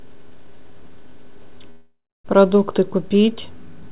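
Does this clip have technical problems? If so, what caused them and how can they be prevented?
Yes: a call audio freeze from 1.70 to 2.26 s. The last sound continues as a fading buzz or hiss, then about 0.26 s of silence, and the audio resumes where it stopped with nothing lost. This is likely the jitter buffer running empty while packets were delayed. On a waveform it appears as a decaying tail and then a flat line. A spectrogram shows a smeared, fading band and then a blank gap, all below 4 kHz, which fits a narrowband call codec. A larger or adaptive jitter buffer and a steadier network path would prevent it.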